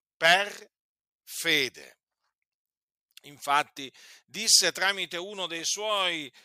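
Listening to the speech recording, nothing technically amiss stood out at any point.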